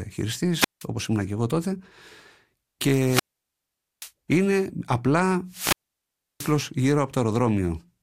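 The analogue FM link repeatedly loses signal strength until the receiver's squelch closes, giving a wireless microphone squelch dropout three times: 0.55–0.86 s, muting for 0.17 s; 3.05–4.12 s, muting for 0.83 s; 5.48–6.59 s, muting for 0.68 s. Each brings a brief swell of hiss, a near-silent hole, then the speech returning.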